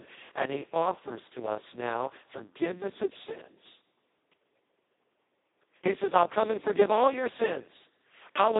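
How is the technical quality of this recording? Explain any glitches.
The quality is poor: heavy Speex codec damage runs through the whole clip. Throughout, the speech sounds hoarse, noisy and close to robotic, because this low-bitrate CELP coder has too few bits to model the excitation. The band runs from about 150 Hz to 3.7 kHz, with nothing above 3.8 kHz. Unlike plain telephone band-limiting, the texture itself is damaged, which points to a setting of roughly 2 kbps.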